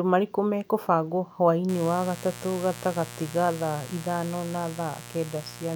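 From 1.69 s, right after "marĩkũ mekũbangwo", a mains buzz enters and runs to the end of the speech. Switching spikes from 60 Hz mains leak in twice per cycle, giving a raspy hum about 15 dB below the speech. A spectrogram shows stacked horizontal lines at 60 Hz multiples climbing into the kilohertz range.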